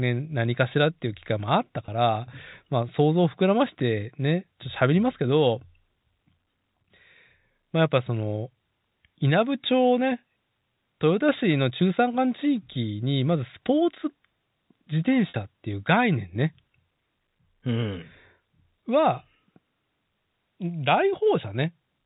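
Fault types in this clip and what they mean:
Packet loss with pitch repetition: audio dropped out for about 20 ms at 1.86 s and about 50 ms from 15.29 to 15.34 s. The receiver bridged each gap by repeating the last pitch period, heard as a brief held, buzzy sustain within the band-limited G.711 telephone sound.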